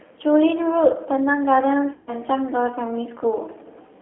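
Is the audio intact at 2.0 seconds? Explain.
No, 2.0 s falls inside a stretch of VoIP packet loss concealed by the speech codec, from about 1.93 to 2.14 s. Around 140 ms of audio went missing, which fits roughly seven lost packets. The decoder kept extrapolating from its last pitch and filter while turning the gain down, so you hear a stretched buzzy tone or coloured noise fading out, and things stay weak briefly after packets resume.

Underneath that, the whole clip has plainly audible G.729 codec damage, which points to G.729A at 8 kbit/s. The speech is rebuilt from a vocal tract model and a few pulses per frame, squeezed into roughly 300 Hz to 3.5 kHz, so it comes across rough and a bit synthetic.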